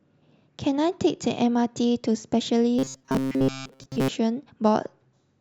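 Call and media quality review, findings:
Robotic sound from repeated short buffers, 2.79–4.09 s: metallic 133 Hz buzz over speech. Likely buffer underrun looping a 7.5 ms block, skipping most real audio.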